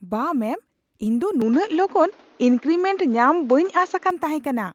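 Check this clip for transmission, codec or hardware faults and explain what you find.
One fault is present. From 1.42 to 4.10 s the input was likely switched to a poorer device. The speech loses everything above 7 kHz and turns dull, shifts in level by about 5 dB, and gains a faint new background noise. There is no gap at either changeover.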